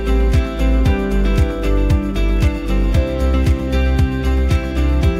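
No technical faults can be heard anywhere in the recording, with the signal holding steady and intact throughout.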